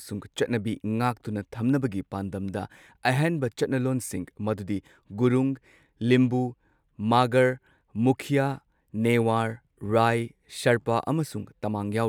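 Nothing goes wrong anywhere in this bit of speech, so there's no fault to point to at any moment.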